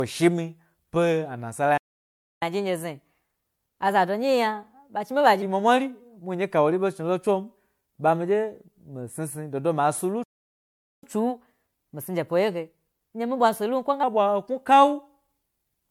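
Throughout, the speech sounds swirly, smeared and hollow, with blurred consonant attacks, which points to generation loss, likely from repeated MP3 encoding at 96 kbit/s. That is worse than a single pass would leave. At 1.77 s the sound drops to silence for 0.64 s, a playback stall, likely from the player running out of data. From 2.42 s to 5.42 s comes catch-up at higher speed: the speech runs at 1.15 times normal speed, about two semitones higher, because the player resamples its backlog. Pitch and tempo rise together, unlike time-stretching. The pattern repeats later, with a 0.79 s playback stall starting at 10.24 s and then catch-up at 1.15 times speed from 11.03 s to 14.03 s.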